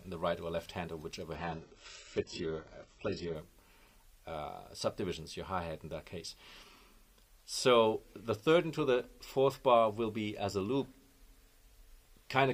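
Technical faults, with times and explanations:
1.35–3.35 s: adaptive stream at a lower bitrate. For two seconds the top end suddenly disappears, with nothing above 8 kHz. Codec artefacts rise, and the sound turns dull and smeared. Quality drops and returns abruptly, with no gap or silence. The player switched to a cheaper version of the stream because the connection slowed. The lost treble fits a very low-bitrate HE-AAC version, around 8 kbit/s, replacing a fuller AAC one.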